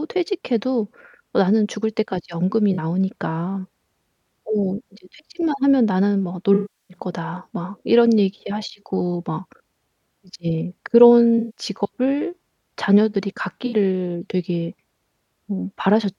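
At 2.73 s, 6.54 s, 11.38 s and 13.66 s the speech shows AAC frame loss with concealment, with gaps of about 43, 363, 171 and 64 ms. Each fits a whole number of roughly 21 ms frames. The decoder replays the last good spectrum with randomised phase, so the short gaps sound smeared and phasey, and the 363 ms one decays toward silence before fading back. A plain dropout would instead cut to hard silence with clicks at its edges.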